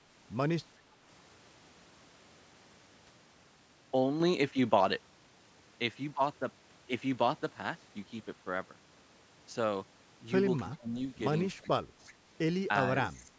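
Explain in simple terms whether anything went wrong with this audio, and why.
Speech suppressed in double talk at 10.79 to 10.95 s, 11.62 to 11.87 s and 13.22 to 13.32 s: the speech briefly dips, likely because the echo canceller heard both sides at once and turned everything down.

Echo leak at 12.07 to 12.13 s: a faint copy of the speech returns about 380 ms late, likely because the far end's loudspeaker sound got past its echo canceller.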